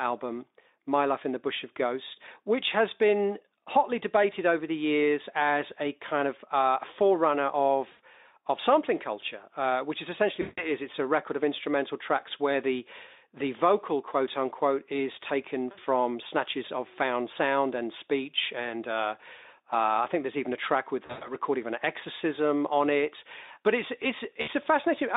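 VoIP packet loss concealed by the speech codec occurs at 7.91 s (after "kind of uh forerunner"), 10.41 s, 15.71 s (before "snatches of found sound"), 21.05 s (after "track with") and 24.41 s, with 60 to 160 ms missing. The decoder stretched its last pitch and filter with fading gain, so each gap becomes a buzzy or noise-like, decaying smear over the band-limited Speex line.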